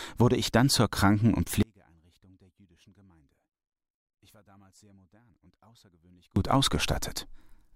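At 1.63 s the speech cuts out abruptly and does not return until 6.36 s, an audio dropout to a faint residue lasting about 4.7 s. The gap holds only a faint leak of the signal, roughly 35 dB down, so the path likely stayed live after losing its feed. The sudden edges distinguish it from a pause or fade.

At 5.34 s, inside that quiet stretch, a tiny skip marks an overlap between stream segments. A sliver of sound is trimmed where two segments' time stamps collide, which fits 2-second segments. It is a tiny jump rather than a lasting silence.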